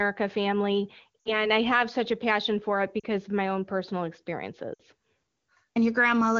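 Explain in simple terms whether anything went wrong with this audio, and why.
Lost AMR speech frames break up the speech at 1.20–1.47 s, 2.99–3.04 s and 4.74–4.81 s, with about 60, 40 and 60 ms of audio missing. Radio errors corrupted those chunks, so the HD Voice decoder stretched the last good sound and faded it, leaving the voice dropping to near silence.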